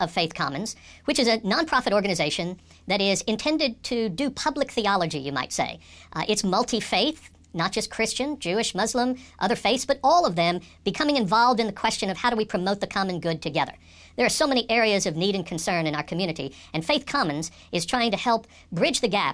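From start to finish the speech runs fast and high. Everything is hurried by a factor of about 1.38 and raised about 5.5 semitones, so voices take on a thin, chipmunk-like quality. This is a wrong sample rate fault. Audio captured at 16 kHz is being played back at 22 kHz with no conversion. Because the samples are read out faster than they were taken, speed and pitch climb together by the same ratio.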